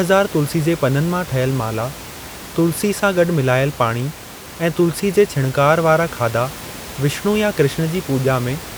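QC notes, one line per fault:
No technical faults are audible in the signal path; the only background is the room's own ambient noise, sitting about 16 dB below the speech.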